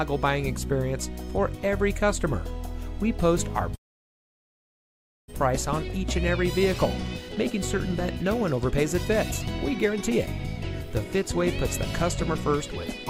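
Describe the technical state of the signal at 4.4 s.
At 4.4 s the signal sits inside a long network dropout running from 3.75 to 5.36 s: a brief fading buzz gives way to near-silence, and about 1 s of audio never returns, likely from packets arriving far too late. Unlike short packet-loss glitches, the gap lasts about 1.6 s and content is skipped.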